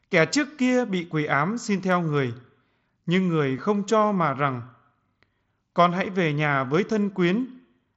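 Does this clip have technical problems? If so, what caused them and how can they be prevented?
Yes. At 3.57 s, between "nhưng người" and "không cho mà rằng", there is a brief buzzy hold of about 15 ms followed by a small warble as the real speech resumes. This is concealed Bluetooth headset packet loss. A short run of voice packets from the headset went missing, which fits two lost frames. The receiver filled the gap by repeating the best-matching recent stretch of waveform, so the sound never drops out but briefly turns tonal. The speech itself carries the mSBC headset codec's wideband character, with content reaching up to 8 kHz. To prevent this, keep the headset close to the phone with a clear line of sight and away from crowded 2.4 GHz interference.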